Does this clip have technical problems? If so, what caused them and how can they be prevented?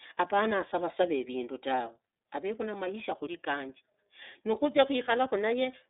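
Yes. Throughout, the speech sounds thin, muffled and plainly rough and synthetic, with nothing above 3.8 kHz. This is the iLBC codec, coding each 30 ms frame independently, consistent with its 13.33 kbps mode. Prevent it by recording or transmitting with a wideband codec instead.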